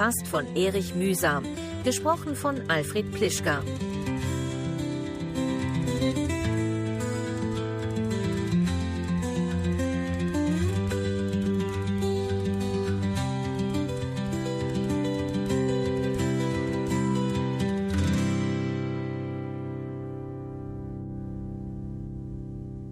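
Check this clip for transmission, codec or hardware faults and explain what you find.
Nothing in the clip points to a fault of any kind. At no point in the audio is there anything to flag.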